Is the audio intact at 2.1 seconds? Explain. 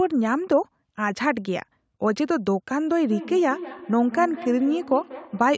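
Yes, the speech is intact at 2.1 seconds, with only the call microphone processing's normal trimming of the lowest bass and a top end that stops around 8 kHz.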